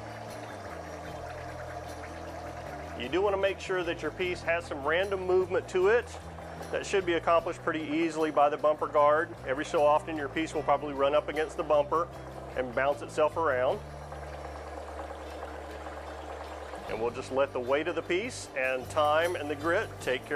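From 18.64 s to the end, pre-emphasis left on: the treble boost was never undone, leaving about 8 dB extra at 10 kHz relative to 1 kHz, fitting the CD 50/15 µs curve. The sound turns thin and sibilant, and a spectrogram shows brighter upper bands.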